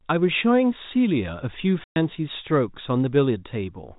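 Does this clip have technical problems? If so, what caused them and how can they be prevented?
Yes: packet loss filled with silence cuts a 120 ms hole in the speech from 1.84 to 1.96 s, which fits six lost 20 ms packets. The receiver played silence in their place, so the gap has hard edges rather than the smeared or repeated sound of concealment. Jitter buffering with loss concealment or forward error correction would prevent it.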